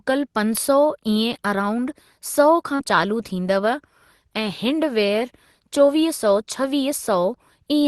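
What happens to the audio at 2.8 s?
At 2.75 to 2.81 s there is a short concealed packet loss: about 40 ms of audio never arrived, and the decoder patched the hole by extending the preceding sound before blending back. Unlike a plain dropout, there is no silent gap, just a brief smear.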